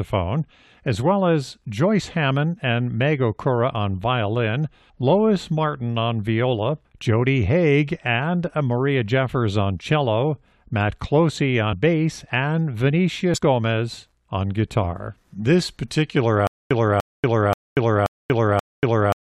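Compressed frames skipped at 11.72 s and again at 13.34 s: whole frames of the encoded speech never reach the output, either because they are missing or because the decoder rejected them as damaged. Playback therefore jumps ahead, by around 50 ms at the first point and around 150 ms at the second, and each jump leaves a short disturbance at the join where the surviving frames meet.

Stutter with silent gaps from 16.47 s to the end: a fragment of about 294 ms plays, then about 237 ms of silence follows, and the same fragment returns on an even cycle of roughly 531 ms, five times in all. This pattern points to a likely stalled player or stream that replays its last fragment at each retry and then runs empty. The speech that should have filled those final seconds is lost.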